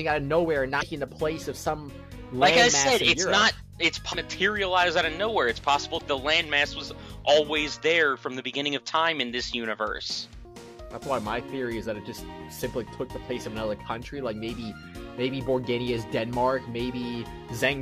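Damaged data in a compressed stream is the fault here: at three points the encoded frames arrive wrong, so the decoder misreads them, loses its place in the bitstream and has to hunt for the next valid frame header before it can resume. Each episode sounds like a short chirp, squawk, click or hole in the audio, at 0.77 to 0.83 s, 4.09 to 4.15 s and 5.94 to 6.01 s, each lasting about 60 to 70 ms.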